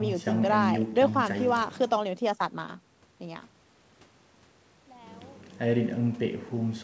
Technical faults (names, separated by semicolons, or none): none